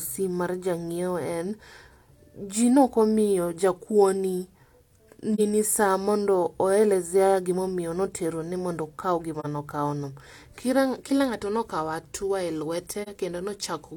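Three brief, soft-edged dropouts break the speech: at 5.35 to 5.40 s just before "saa mondo oelezea gimomio", at 9.40 to 9.46 s between "notero ni mondo okao" and "nokao no", and at 13.02 to 13.09 s right after "ng'ato nokao atua e". Each fades out and back in. This is AAC frame loss with muting: each hole, about 43 ms long, fits a single lost frame whose spectrum the decoder zeroed, with the overlapping windows smoothing the edges.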